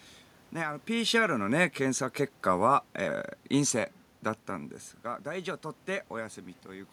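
Automatic gain falling, 0.91 to 3.02 s: the gain control judged the input too loud or its background noise too strong and gradually lowered it by about 3 dB, with the room noise sinking alongside.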